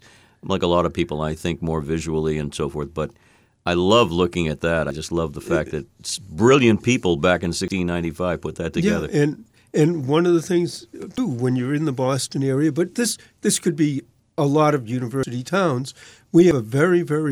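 The speech skips ahead at 4.91, 7.68, 11.18, 15.23 and 16.51 s. Each jump removes roughly 40 to 150 ms, with no gap. A dropped buffer (overrun) is the likely cause.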